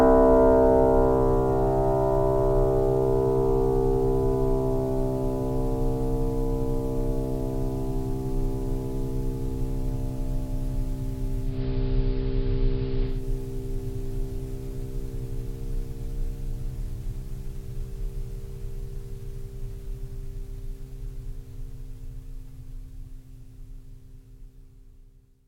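A music clip with digital radio blending to analogue from 11.41 to 13.26 s: a 228 ms cross-fade to the AM broadcast shifts level by about 4 dB and adds hiss well below the music.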